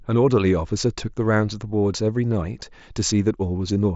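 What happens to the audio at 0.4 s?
Nothing goes wrong at 0.4 s: the speech there is intact, carried through the Bluetooth mSBC headset codec with its usual wideband ceiling a little under 8 kHz.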